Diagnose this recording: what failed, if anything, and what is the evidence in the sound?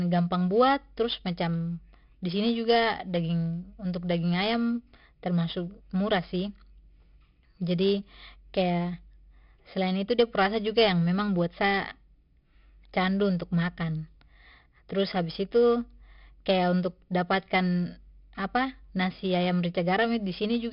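The failure is at the codec stage: 4-bit ADPCM compression, heavy, across the whole speech recording. A gritty hiss rides on every loud syllable and vanishes in pauses, and sharp onsets crunch where the adaptive step size lags behind the signal. Nothing exists above 5.3 kHz, which fits a sample rate near 11 kHz and roughly 44 kbps. On a spectrogram, look for a flat ceiling at 5.3 kHz and a level-tracking noise floor. On the waveform, look for jagged overshoot on attacks.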